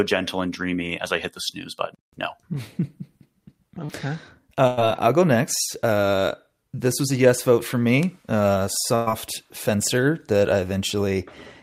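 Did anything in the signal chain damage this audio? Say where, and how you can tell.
Yes. At the network stage, a short concealed packet loss at 3.85 to 3.91 s dropped about 40 ms. The receiver extrapolated the preceding sound, leaving a brief smear.

Two bursts of packet loss, at 4.67 to 4.79 s and 8.95 to 9.08 s just before "fencer that I", dropped 100 and 120 ms. Concealment held the sound, faded it, then jumped ahead.

A bit error spike at 8.03 s, right after "a yes vote for", corrupted three consecutive samples on a digital link or in memory, producing one sharp broadband tick.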